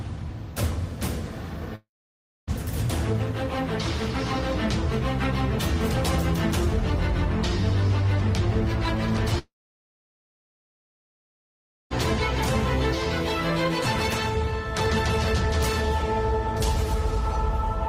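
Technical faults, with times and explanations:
1.75–2.50 s and 9.39–11.93 s, long network dropout: a brief fading buzz or hiss, then flat waveform and blank spectrogram for about 0.6 s and 2.4 s, likely lost packets never played.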